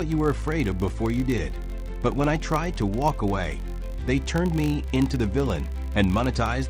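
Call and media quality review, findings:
Filter restarted on every block. Buzz at 50 Hz throughout, tracking signal level. Filter state resets each block, so each block starts with a transient, consistent with 20 ms blocks.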